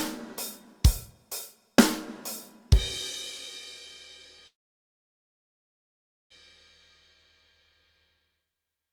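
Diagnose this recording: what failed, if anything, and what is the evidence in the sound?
Network call audio freeze, 4.47 to 6.32 s: flat waveform, blank spectrogram, likely from delayed packets emptying the jitter buffer. The audio then resumes where it stopped.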